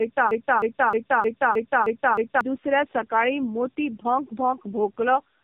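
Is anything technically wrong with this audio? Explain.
Yes, there are two faults. From the very start to 2.41 s there is a broken-record loop. The player or stream likely stalled and kept resending its last buffered fragment. A 310 ms piece repeats seven times back to back, and the audio meant for that span is lost until normal speech resumes with "दुसऱ्या सकाळी मोती भोंक".

Throughout the clip there is tandem speech coding. The call passed through two separate speech codecs, matching a G.729A leg followed by AMR-NB. Each re-encoded the previous one's damaged output, so the errors compound. The speech sounds rough, muffled and warbly, with nothing above 3.5 kHz.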